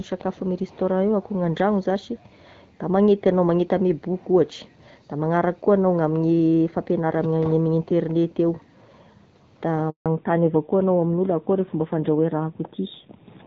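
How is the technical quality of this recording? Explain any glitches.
Two glitches near the end of this phone-call speech, and they come back to back. Before that, the audio carries the light coding character of HD Voice, which fits AMR-WB at around 12.65 kbit/s.

The handover gap runs from 9.90 to 10.06 s. The phone moved the call between networks, and for those 160 ms no speech frames came through. The voice fades out within a few tens of milliseconds, then there's dead silence until the new link picks up, and that bit of talk is simply gone.

Fallback to narrowband starts right at 10.06 s and lasts to the end. After the handover the call dropped from wideband to the older narrowband codec, probably a mode like AMR-NB 7.4 kbit/s. Nothing above 4 kHz survives, so the voice turns duller and rougher for the last few seconds.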